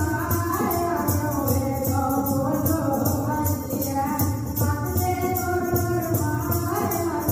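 Nothing stood out as a technical fault anywhere in the audio on listening.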